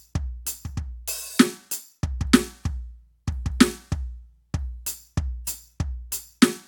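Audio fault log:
No fault is heard in this music clip.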